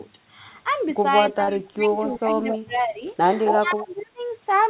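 From 1.31 to 1.95 s the speech dips by up to about 25 dB, likely speech suppressed in double talk: the echo canceller is attenuating the near talker while the far side speaks. Inside it, at 1.44 to 1.50 s, a short concealed packet loss fills about 35 ms of 40 ms of missing audio with a brief smeared continuation. Echo leak follows at 2.13 to 2.18 s, where a copy of the voice returns about 263 ms late and about 15 dB down. This is likely residual loudspeaker echo passing the canceller. Further dips of about 20 dB occur at 2.15 to 2.48 s and 2.64 to 3.03 s. The same 263 ms echo returns at 2.51 to 2.58 s (about 5 dB down) and 3.45 to 3.58 s (at speech level). The deepest dip, about 30 dB, runs from 3.58 to 4.21 s. A faint echo trace, about 40 dB down, appears at 3.98 to 4.02 s.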